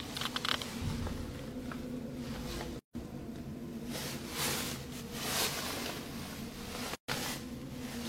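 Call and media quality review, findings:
Gap at a join of encoded pieces: silent holes at 2.79–2.95 s (160 ms) and 6.95–7.08 s (133 ms), spaced 4.0 s apart. Separately encoded segments were concatenated with encoder delay and last-frame padding left in. Unlike a dropout, no sound is skipped: the sound resumes exactly where it stopped, with smeared edges.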